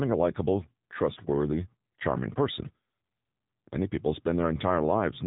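From start to end the speech carries AMR narrowband mobile codec damage. Nothing survives above 4 kHz, and the voice turns buzzy and synthetic, which fits a low mode near 6.7 kbps. Unlike a plain telephone-band filter, the voice itself sounds rebuilt rather than just muffled.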